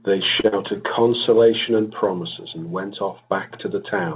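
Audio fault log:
0.40–0.47 s, short stall from a late packet: a packet arrived late, the jitter buffer ran dry, and the receiver held the last speech sound for about 37 ms before resuming at the same point. Nothing is lost, but the sound lingers unnaturally with a faint buzz or dip, and playback now runs about 37 ms later. On a spectrogram the held sound runs flat and frozen, stopping at 4 kHz like the rest of the G.711 call band. The waveform shows the same stretch repeated almost identically.
0.48–0.55 s, short concealed packet loss: about 40 ms of the call never reached the decoder. The receiver filled the gap with roughly 39 ms of invented continuation built from the preceding sound, then blended back into real audio. Coming straight after the stall, this is heard as a brief smear or wobble, and a short consonant in that span may be gone. A spectrogram shows blurred, slightly flattened harmonics or diffuse noise fading in level. 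The waveform shows copied cycles that taper into a crossfade.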